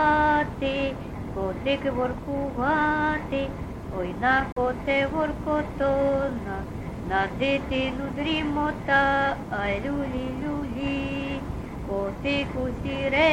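A Bluetooth dropout runs from 4.52 to 4.58 s: the sound cuts to silence for about 43 ms, then resumes further along, as if it had kept playing. This is likely packets missing their deadline to the headphones, which fits two lost frames.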